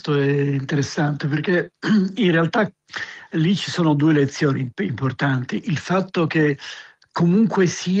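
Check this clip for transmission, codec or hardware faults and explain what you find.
Two related timing faults are present, both coming from a mismatch between the two ends' clocks.

Clock drift between sender and receiver runs through the whole clip. The sending clock runs about 1.5% slow relative to the receiver, so the jitter buffer keeps draining and the receiver must stretch the stream to avoid running empty. The result is a faintly dragging, uneven pace rather than any single obvious glitch.

Repeated timing corrections appear from 0.24 s to 7.93 s. To make up for the slow sender, the receiver repeatedly inserts short duplicated fragments, all lengthening the audio, at irregular spacing. Together they add roughly 150 ms, so playback runs at about 98% speed, heard as slight hiccups and a wavering tempo. The Opus call path itself carries content up to about 12 kHz.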